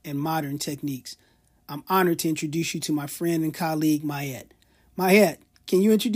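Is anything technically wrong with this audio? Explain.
No, nothing is technically wrong with this audio.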